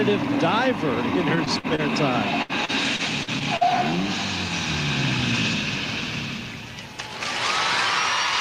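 From 1.35 to 1.81 s, and again from 2.42 to 3.64 s, repeated packet loss makes the audio choppy and robotic. Missing stretches are patched by extending the preceding sound, with gaps up to 49 ms and then 70 ms.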